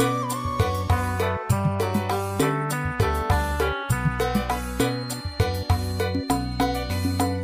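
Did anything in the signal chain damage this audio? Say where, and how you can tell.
Yes. From 4.74 s to the end at 7.43 s a thin, steady tone at 4.2 kHz sits behind the sound, roughly 20 dB down and swelling and fading slowly in level. That's a feedback whistle, most likely from the acoustic loop on the analogue side, with a loudspeaker feeding back into the microphone. The loop gain is sitting right at the edge, so that one frequency keeps ringing without building up into a full howl.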